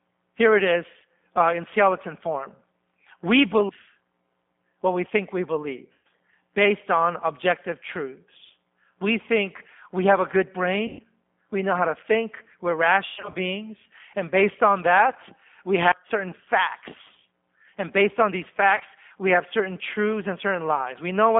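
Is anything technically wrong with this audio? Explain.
Yes. The whole clip of speech is carried by the G.729 codec at 8 kbit/s, and the band is confined to roughly 200 Hz to 3.5 kHz. The codec rebuilds the voice from a vocal tract filter, a pitch predictor and a few pulses per frame, so the speech sounds audibly rough, synthetic and muffled.

VoIP packet loss concealed by the speech codec occurs at 5.93–6.07 s, 10.87–11.01 s, 13.06–13.36 s and 18.76–18.82 s. In each gap the decoder extends its last pitch and filter with falling gain, so the sound smears into a buzzy tone or coloured noise that fades. The first two gaps are about 120 ms each. Near 13.1 s the dropouts are scattered over roughly 280 ms, and the last is a brief 40 ms.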